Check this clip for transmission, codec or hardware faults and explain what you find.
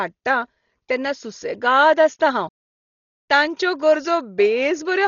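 One codec fault runs through the whole speech clip. Dolby Digital compression, throughout: likely starved of bits, consistent with about 32 kbps, the encoder has cut the band at 7 kHz and left many frequency lines as filler noise, so the sound is dull, with a rough, fluttering haze around the voice.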